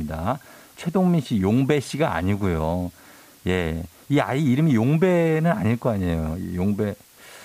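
From start to finish the speech sits over a constant, even hiss with no distortion, which fits low bit depth with dither at about 8 bits. Dither turns rounding error into white noise roughly 30 dB below the signal, showing as a flat floor across every frequency, pauses included.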